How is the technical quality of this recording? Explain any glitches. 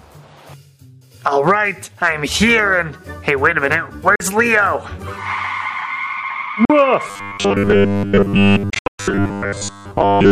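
The recording has clear technical problems: brief holes in the sound and a buzzy, mechanical texture through its final seconds.

Bluetooth dropout, at 4.16 to 4.20 s, 6.65 to 6.70 s, and 8.70 to 8.99 s. Each is likely caused by audio packets reaching the headphones too late and being discarded. The first two are clean gaps of roughly 45 ms. The third is a cluster of short gaps totalling about 230 ms, the longest about 120 ms. Each time, the sound resumes as though it had kept playing.

Robotic sound from repeated short buffers, from 7.08 s to the end. Fresh audio arrives too slowly, likely forcing the playback software to loop its last 10 ms slice in place of most of the real material. The looping stamps a fixed 100 Hz buzz onto the sound, giving it a rigid, metallic quality that still loosely follows the original.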